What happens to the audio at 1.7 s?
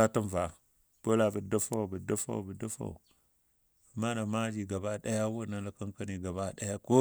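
At 1.73 s a sharp snap sits on top of the speech. It is an electrical switching spike, lasting only a couple of milliseconds and peaking around -25 dBFS. The likely cause is a nearby switch or discharge arcing briefly and coupling into the audio line.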